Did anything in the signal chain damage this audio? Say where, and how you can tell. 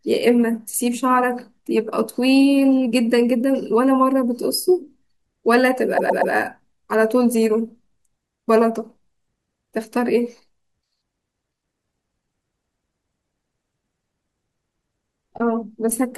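Yes: repeated frames at 5.97–6.33 s. A 120 ms block of compressed frames, likely duplicated in storage or transmission, plays three extra times, stuttering and adding 360 ms.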